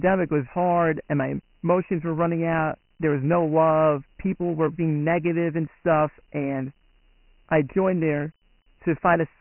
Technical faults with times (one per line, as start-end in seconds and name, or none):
0.00-9.41 Dialogic VOX ADPCM